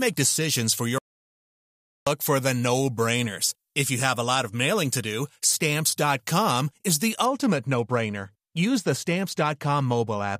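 Pre-emphasis left on from 0.0 to 7.26 s: treble boosted about 14 dB at 10 kHz relative to 1 kHz, fitting a 75 µs FM curve never de-emphasised, so speech sounds thin, bright and hissy. Audio dropout to silence from 0.98 to 2.07 s: about 1.08 s of silence with no room tone, likely from a lost input while recording continued.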